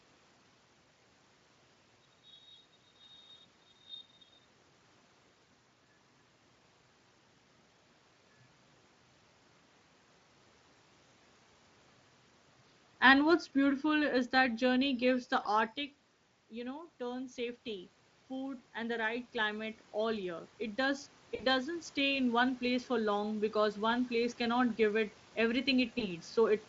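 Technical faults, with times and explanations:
13.07 to 14.88 s: automatic gain falling. The gain control judged the input too loud and backed its gain off by about 4 dB over nearly two seconds. The speech and the room noise behind it sink together, because the whole signal is scaled at once. The drop is gradual, not a step. That sets it apart from a talker moving away, which changes the voice but leaves the background level alone.
15.43 s, 21.35 to 21.46 s, 25.99 to 26.09 s: VoIP packet loss concealed by the speech codec. Packets went missing: one 20 ms frame at the first and last points, two frames (40 ms) at 21.35 s. The decoder filled each gap by carrying on from its last pitch and spectral shape while fading the level. Each gap turns briefly buzzy or hollow. The sound stays weak and smeared for a short while afterwards, since every decoded frame builds on the one before.
16.49 to 24.38 s: automatic gain rising. 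The input fell by about 13 dB, and the gain control answered by raising its gain about 12 dB over roughly eight seconds. The voice and the room noise swell back together, slowly. Because the background rises with the speech, the change comes from the gain stage and not from the talker moving, which happens around 15.5 s. The light Speex coding, which fits a bitrate near 28 kbps, carries through this rise.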